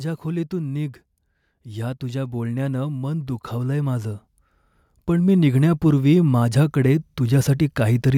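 The automatic gain control judged the input too quiet and raised its gain slowly, about 6 dB from 1.66 to 4.21 s and about 7 dB from 5.06 to 8.1 s. Each time the speech and background noise swell together.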